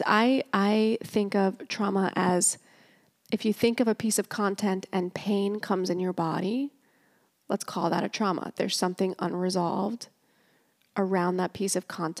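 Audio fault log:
No technical faults turn up anywhere in the speech signal.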